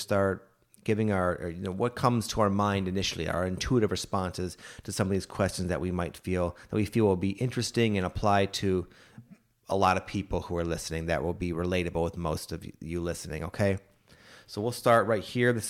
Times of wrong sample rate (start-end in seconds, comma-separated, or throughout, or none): none